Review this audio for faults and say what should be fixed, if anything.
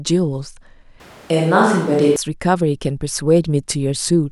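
From 1.0 to 2.16 s, the speech turns abruptly roomy and hollow, with thinner bass. The level stays similar. This is likely a switch to a distant microphone. Monitor the close microphone's feed during recording so a dropout is caught and fixed.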